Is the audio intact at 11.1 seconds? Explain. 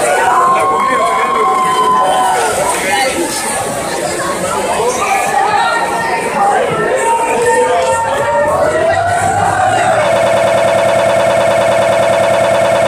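No. The player or stream likely stalled and kept resending its last fragment, a broken-record loop from 10.16 s to the end. A 104 ms slice repeats exactly, back to back, 26 times, giving a rapid stutter while the audio meant for that span is lost.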